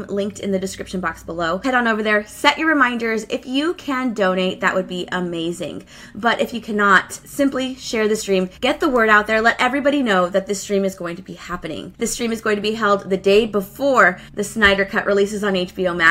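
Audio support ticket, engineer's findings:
No audible faults found in this clip. Nothing in the signal path points to a failing component.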